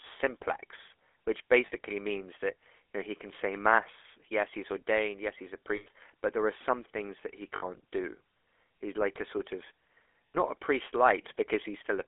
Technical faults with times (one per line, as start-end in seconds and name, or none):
0.00-12.07 GSM full-rate codec
1.66-1.73 lost GSM frames
5.76-5.87 lost GSM frames
7.56-7.63 lost GSM frames
10.31-10.35 lost GSM frames